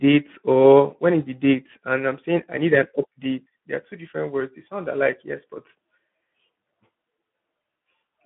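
Throughout, the speech carries plainly audible Speex codec damage, hoarse and noisy from starved excitation coding, which fits roughly 11 kbps, band-limited to 150 Hz to 3.4 kHz, nothing above 3.8 kHz.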